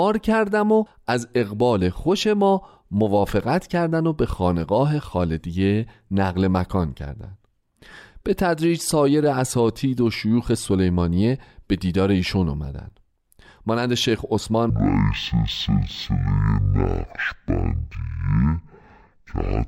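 A speech clip in which the last section, from 14.70 s to the end at 19.68 s, shows a stereo read as mono fault. The interleaved left and right samples are being taken in sequence as one channel, so each frame occupies two sample slots. Playback therefore runs at 0.5× speed and the pitch drops by 12 semitones, a full octave, and a fainter mirrored copy of the content appears in the upper half of the spectrum.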